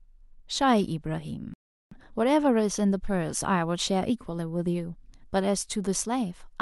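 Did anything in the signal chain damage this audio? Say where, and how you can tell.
Yes. The fault sits at the playback stage: a playback stall, most likely the player running short of data or its output thread being blocked. The speech cuts out abruptly at 1.54 s and the output falls silent for about 0.38 s, until 1.91 s, before the sound resumes. The break lands mid-flow rather than at a natural pause, and the clean silence with no noise or fill during the gap marks it as the output stopping.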